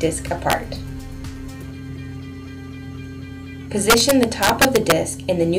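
Integer overflow hits twice, at 0.50–0.53 s and again from 3.9 to 4.92 s. Peaks pushed about 4 dB past full scale wrapped to the opposite sign instead of being limited, so loud moments flip across the range and crack far harsher than ordinary clipping.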